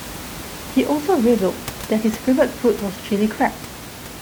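Nothing in the audio points to a technical fault, and the only thing under the speech is the room's own background noise, sitting about 15 dB below it.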